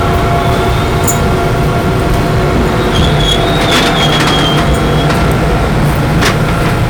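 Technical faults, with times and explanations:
Throughout: hard clipping. The audio is driven about 14 dB past what the stage can pass, so roughly a sixth of the waveform is sliced flat. Unlike soft saturation's rounded warmth, these squared-off tops spray high harmonics, giving a harsh fuzz on every loud sound.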